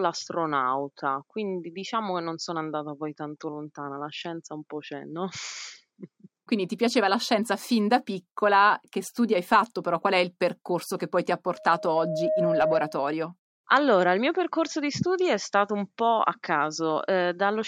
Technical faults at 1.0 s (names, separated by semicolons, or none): none